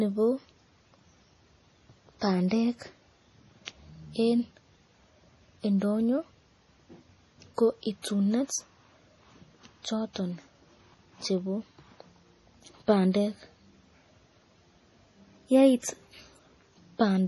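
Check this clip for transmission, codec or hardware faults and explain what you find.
Two codec faults are present in this speech clip: lossy compression damage throughout, and two short pre-echoes.

Heavy compression damage runs throughout, likely from MP3 encoding. Nothing sounds above 11.5 kHz, and weak frequency lines flicker on and off between frames, giving a watery, swirly texture and chirpy sibilants. That fits a starved bitrate near 32 kbps. Unlike plain low-pass filtering, the swirl moves with the sound.

Pre-echo appears from 3.65 to 3.68 s and from 8.02 to 8.04 s. Each time, a short hiss of about 22 to 24 ms runs just ahead of a sharp onset. The coder spread quantisation noise across its block, so noise meant for the loud attack leaked into the silence before it. Unlike a click or dropout, the hiss leads the attack and softens it.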